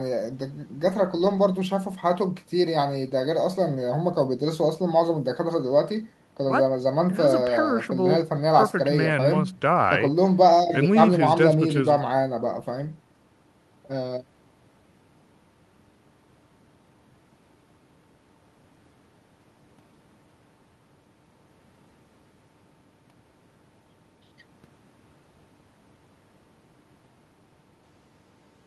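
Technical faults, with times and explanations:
No technical faults can be heard, so there are no times or explanations to give.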